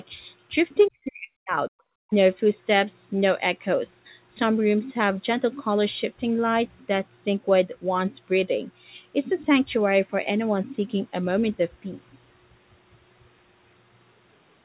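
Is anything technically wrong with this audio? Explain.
Yes, there are two faults. Speech suppressed in double talk, 0.89 to 1.73 s: the speech dips by roughly 40 dB in pieces, about half a second in total, likely because an echo canceller mistook overlapping talk for echo. Background gated by the echo canceller, 2.03 to 2.09 s: the canceller clamps the microphone, briefly dropping the room sound by about 38 dB before it returns.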